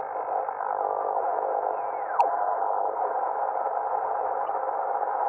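Throughout, the encoder appears to have been starved of bits, likely from MP3 compression at a low bitrate around 64 kbps. Weak frequency detail flickers in and out from frame to frame, giving the sound a plainly audible watery, swirly texture with smeared attacks.

From 2.19 to 2.21 s, a corrupt frame was decoded: damaged data across a couple of frames was played as if valid, throwing energy into the wrong frequencies. It is heard as a short glitch peaking around -15 dBFS. A second corrupt frame, a single one this time, hits from 4.47 to 4.49 s and gives a quieter glitch near -25 dBFS.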